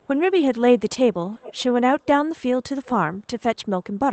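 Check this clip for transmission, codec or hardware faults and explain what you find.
An echo leak is audible at 0.02–0.07 s, 1.33–1.62 s and 2.85–2.90 s. A delayed copy of the speech returns about 370–390 ms late, faint at first and then more distinct. The likely cause is a far-end loudspeaker echo canceller letting residual pickup through.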